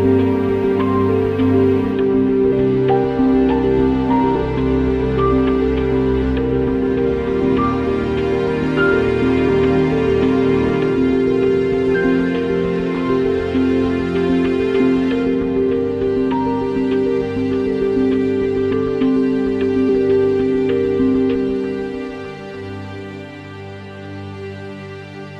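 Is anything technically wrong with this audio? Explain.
Yes. Compressed frames are skipped at 2.51, 4.34, 9.48, 11.94, 14.79, 18.72, 19.88 and 21.34 s. Each time, whole compressed frames never reach playback, so the audio leaps ahead by roughly 0.1 to 0.4 s, which fits a 23.2 ms frame length.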